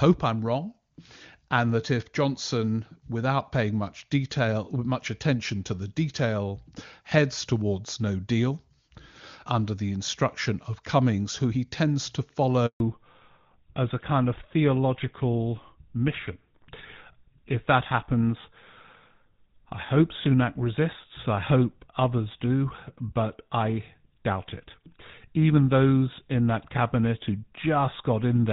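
At 12.66 s the speech fades out within a few tens of milliseconds and stays silent for 140 ms, returning at 12.80 s. This is a handover gap: the call switched networks and no speech frames arrived during the switch, so that stretch is lost.

From 12.80 s to the end, the speech turns duller and rougher, with nothing above 4 kHz. This is a fallback to narrowband. Before the handover, the clear wideband sound fits a high-rate HD Voice codec; afterwards, the call drops to an older narrowband codec, consistent with GSM full rate.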